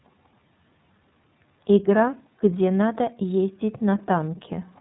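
Throughout, the speech sounds narrow, slightly rough and synthetic, with nothing above about 3.8 kHz. This is the iLBC codec, which codes each frame's excitation independently at a narrowband rate. The damage is plainly audible, consistent with its 30 ms frame mode at 13.33 kbps.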